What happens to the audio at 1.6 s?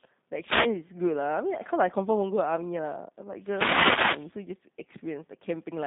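At 1.6 s, as throughout, G.729 coding rebuilds the speech from a predictive model at 8 kbit/s, so it sounds rough and synthetic, with nothing above 3.7 kHz.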